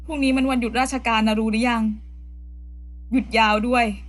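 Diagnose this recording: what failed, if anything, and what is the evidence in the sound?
Mains hum runs through the whole recording as a steady low tone at 60 Hz with a few low harmonics, sitting roughly 15 dB below the speech. It doesn't rise or fall with the speech, so it was picked up in the analogue wiring before conversion. A ground loop between connected equipment, or induction from a nearby transformer, couples the 60 Hz power line into the signal path. The fix is there too, by breaking the loop or rerouting cables.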